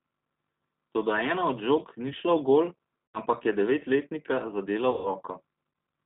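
Throughout, the G.729 codec's 8 kbit/s rebuild leaves the speech plainly rough and synthetic; a spectrogram shows nothing above 4 kHz. At 3.12 s, after "ni šla v gol", VoIP packet loss concealed by the speech codec stretches the sound into a fading buzzy tone or coloured noise, suggesting about 80 ms lost, with smeared harmonics and a decaying waveform envelope. Again at 4.91–5.13 s, after "ampak je devetletnika zadela", a longer concealment of roughly 140 ms fades out.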